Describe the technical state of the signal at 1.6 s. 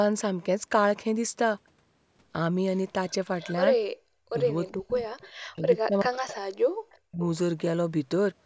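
At 1.6 s the speech signal is intact, with no fault to be heard beyond the normal band limiting of the call's microphone processing, which leaves nothing above 8 kHz.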